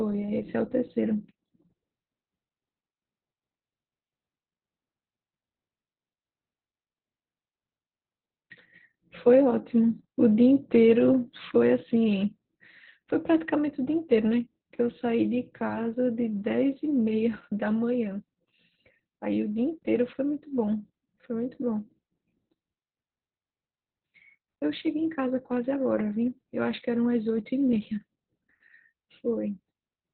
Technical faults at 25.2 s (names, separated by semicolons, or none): Opus voice compression